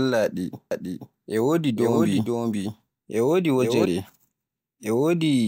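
From 0.71 s to 3.85 s a doubled audio track appears: a second, full-band copy of the speech trails about half a second behind, around 5 dB quieter, with no decay or room colour, and it cuts in and out abruptly. Likely a slower second capture path.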